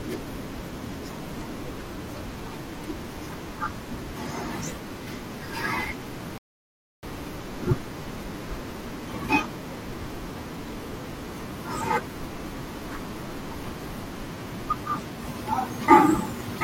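At 6.38 s a rebuffering stall: playback starved, leaving 0.65 s of silence, flat waveform and blank spectrogram, before speech resumes unbroken at 7.03 s.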